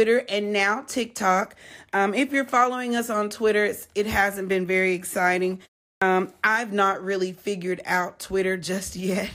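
At 5.97 s, the output device has dropped to sleep during the 0.38 s pause after "hasn't been very exciting" and has to wake again. The first 45 ms of sound are swallowed, so "I've not really figured" jumps abruptly out of silence: a clipped start after a pause.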